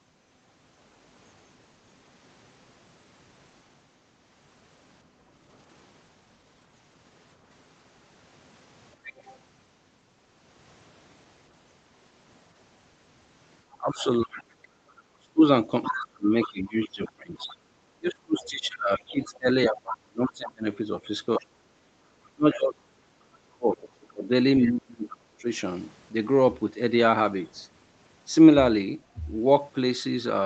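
At 9.05 to 9.38 s there's a short scrap of the other side's voice leaking through, sitting around 20 dB under the talker. It's likely loudspeaker echo that the echo canceller didn't fully remove from the microphone. A longer stretch of the same leak runs from 13.71 to 20.32 s, louder this time at roughly 15 dB below the speech.

Overlapping that, from 13.79 to 25.47 s, the talker's speech is suppressed in double talk. Their voice keeps dipping and cutting out in pieces for about seven seconds in total, at worst by around 30 dB. That's the canceller likely ducking both sides at once because it couldn't separate the talker from the echo.

Inside that stretch, at 14.77 to 14.87 s, the background is gated by the echo canceller. The room sound drops by about 7 dB for roughly a tenth of a second while the loudspeaker plays, then comes straight back.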